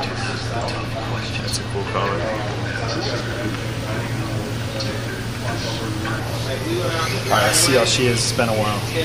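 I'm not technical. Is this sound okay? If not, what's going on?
No. There are two brief skips, at 1.39 s and 3.20 s, where the sound jumps forward instead of flowing on. Each time, roughly a twentieth of a second of audio goes missing, and the parts on either side are joined with no gap. The likely cause is a dropped buffer (overrun): the recording software fell behind, and the hardware overwrote a chunk of sound before it could be saved.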